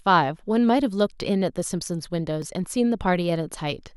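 Speech, with two blocks of digital silence at 1.21 s and 2.42 s. Each is a hole of about 1.5 ms, which fits a 64-sample buffer the program didn't fill in time, so the sound drops straight to zero and back, heard as a tick or dip.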